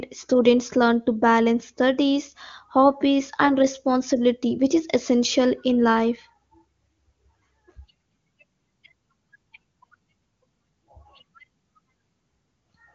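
Speech heard through an AMR wideband (HD Voice) channel, with nothing above about 7 kHz as that path allows, and there is no technical fault in it.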